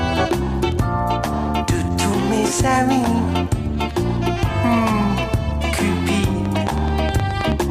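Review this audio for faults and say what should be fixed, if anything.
A train of clicks runs from 6.46 to 7.63 s. About ten regular clicks arrive 9.4 per second, peaking roughly 10 dB above the sound. Likely nearby interference or a faulty connection or power supply. Check grounding, shield cables, and keep equipment apart.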